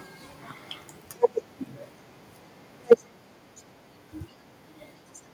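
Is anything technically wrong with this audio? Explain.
Yes. From 2.91 to 2.93 s there is microphone overload: peaks roughly 3 dB past the converter's limit, with about a fifth of the samples flattened, likely from an input set too hot. This gives a brief harsh crackle, unlike a smooth limiter. At 2.93 s the microphone volume is stepped down by about 2 dB in one jump, likely the call software reacting to that peak. Voice and background drop together, which sets it apart from a fade or noise gate.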